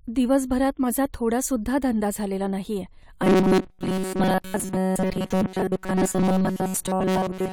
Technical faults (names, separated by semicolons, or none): robotic sound from repeated short buffers